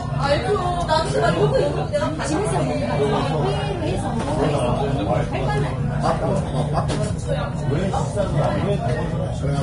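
Throughout, the sound is hissy and grainy, with roughened tones and smeared attacks, likely from heavy Vorbis compression at a low bitrate, around 30 kbps. Treble detail turns into noise, and a spectrogram shows nothing above 10.6 kHz, with speckled, patchy energy just below that ceiling.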